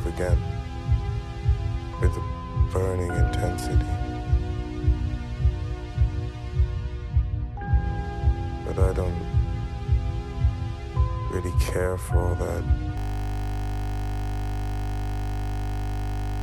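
At 12.98 s a system hang loop begins and runs to the end. The machine froze while the sound hardware kept replaying one 20 ms stretch of its buffer. That exact repetition, 50 times a second, turns into a steady buzz at 50 Hz.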